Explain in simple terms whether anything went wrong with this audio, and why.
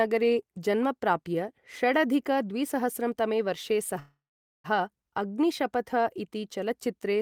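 Something did go wrong, right after "तमे वर्षे": from about 3.99 s to 4.66 s there's a call audio freeze. The last bit of sound hangs on as a fading buzz, then goes quiet for roughly half a second. The likely cause is delayed network packets leaving the receiver's buffer with nothing to play. When the speech picks up again, nothing's lost, but everything after that point runs about 0.65 s late.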